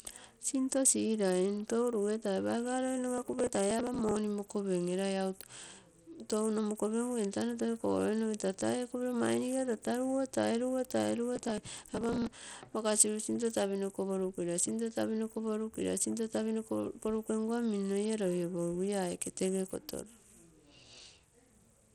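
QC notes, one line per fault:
throughout, Bluetooth SBC compression: the speech sounds dulled and gritty, with the top end thinning and flickering and a grainy hash riding on every phrase. This is likely SBC coding at a low rate, around 80 kbps, where the highest sub-bands get starved of bits and the rest are coarsely quantised.
3.18–4.17 s and 11.36–12.42 s, processor overload crackle: dense crackle and tearing for about a second each time, the first right after "rugetai paiga loi", the second ending just before "makasiru sinto tapinoko prukira". Audio buffers of roughly 5 ms kept missing their deadlines and were skipped, dozens in a row, leaving hard-edged gaps.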